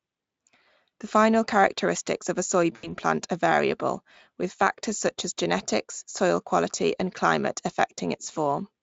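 From 2.75 to 2.92 s, just after "final characteristics of a", the sound smears into a buzzy tone or coloured noise that fades before "plant are variable with" resumes, still weakened. This is VoIP packet loss concealed by the speech codec: about 80 ms went missing, which fits four lost 20 ms Speex frames. The decoder stretched its last pitch and filter with falling gain, and its rebuilt state needed time to recover.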